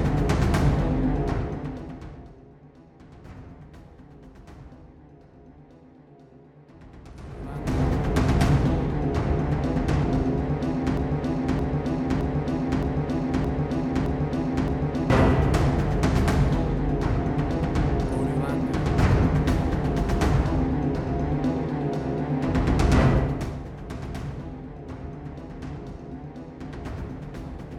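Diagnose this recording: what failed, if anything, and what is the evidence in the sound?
From 10.97 s to 15.10 s, a 0.62 s fragment repeats exactly, back to back, seven times. This is a broken-record loop. The likely stage is the playback or streaming buffer, which stalled and kept resending its last held block, so the audio for that span never arrived.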